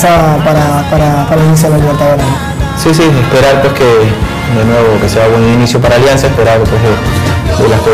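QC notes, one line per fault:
Throughout: hard clipping. The signal is driven about 22 dB past what the stage can pass, so nearly a third of the waveform is sheared flat at the ceiling. Those squared-off tops add strong upper harmonics, heard as a harsh, constant fuzz on every loud passage.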